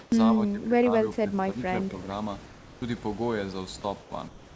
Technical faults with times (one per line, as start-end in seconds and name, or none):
0.00-0.06 echo leak
0.06-1.62 speech suppressed in double talk
2.46-2.82 comfort noise in place of the background
4.00-4.55 comfort noise in place of the background